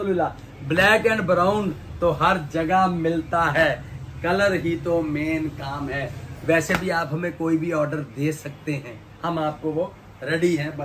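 No technical faults can be heard in this audio. There is nothing here to place in time or trace to a cause.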